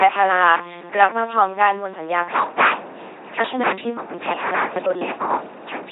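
LPC-10 vocoder damage runs through the whole speech clip. Each moment is rebuilt as either a pulse-driven buzz or noise through a simple vocal tract filter, giving a heavy, mechanical robot quality, which fits a 2.4 kbit/s rate.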